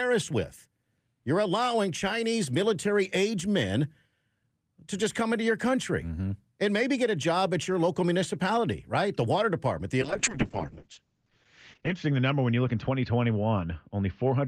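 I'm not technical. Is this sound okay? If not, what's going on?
No. There is a call bitrate drop from 10.02 s until the end of the clip. The call's connection estimate fell, so the speech was squeezed into far fewer bits. To cope, the encoder packs the sound more crudely and drops everything above about 8 kHz, so the speech turns muffled and rough. It sits at its worst for about 1.9 seconds and does not recover before the clip ends.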